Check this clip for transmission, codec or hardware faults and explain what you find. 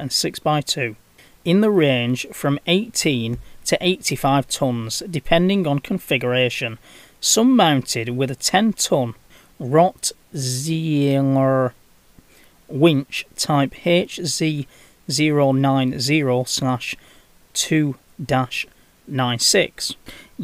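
No transmission, codec or hardware faults detected; nothing to report.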